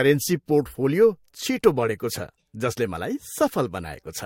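Transcoding between lossy codecs runs through the whole speech clip. Nothing is heard above 16.5 kHz, and two layers of coding artefacts sit on top of each other. The cause is likely an MP3 encode re-encoded to Vorbis, with both stages at low, similar bitrates.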